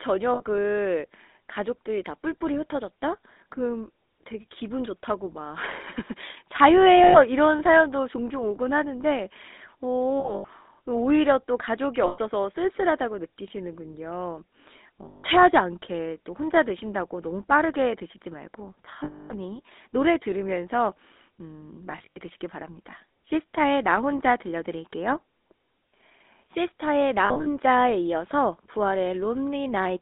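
All the way through, the speech carries the buzzy, gravelly roughness of the GSM full-rate codec, squeezed into roughly 250 Hz to 3.7 kHz, which fits the 13 kbps full-rate coder. Its pulse-driven excitation stands in for the real voice source, and that's plainly audible.

On top of that come lost GSM frames at 0.34 s (60 ms), 7.04 s (100 ms), 10.2 s (180 ms scattered over 280 ms), 12.06 s (120 ms), 15.08 s (160 ms), 19.04 s (260 ms), 21.92 s (140 ms over 240 ms) and 27.26 s (120 ms over 200 ms). Each time the decoder holds the last good frame, so you get a brief rough, metallic ring. The longest dropout is at 19.04 s.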